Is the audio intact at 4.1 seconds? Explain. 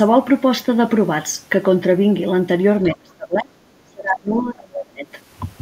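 No. From 3.84 to 5.06 s, speech is suppressed in double talk, likely because the echo canceller ducked this talker along with the far-end echo. It drops by around 30 dB and the waveform shrinks.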